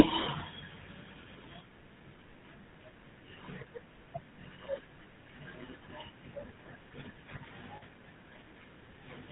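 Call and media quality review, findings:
GSM full-rate codec, whole clip: plainly audible buzzy, gravelly roughness on speech, nothing above 4 kHz. Vocal-tract model driven by sparse regular pulses, excitation decimated to every third sample. Fits the 13 kbps GSM full-rate coder.

Lost GSM frames, 7.76 to 7.83 s: brief rough, metallic ring, about 60 ms, consistent with three 20 ms frames. Concealment repeats the last good frame's parameters rather than muting.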